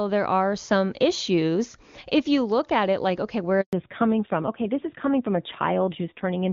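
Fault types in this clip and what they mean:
Handover gap: After "it like okay where" the sound fades out within a few tens of milliseconds at 3.61 s and stays fully silent for 120 ms, until 3.73 s, while the call moves to another network and no speech frames arrive. Unlike a packet-loss glitch, which a decoder hides with stretched or repeated sound, this gap is true silence. It also marks a lasting change, because the audio that resumes is different.
Fallback to narrowband: From 3.73 s to the end, everything above 4 kHz is gone and the speech turns duller and rougher. Before the switch, the HD Voice codec carried clear wideband speech, which fits AMR-WB at 23.85 kbit/s. After the switch, the sound fits narrowband AMR-NB at about 7.4 kbit/s. A low-rate wideband codec would still keep content up to 7 kHz. Here the band stops at 4 kHz and stays there, so this is a narrowband fallback.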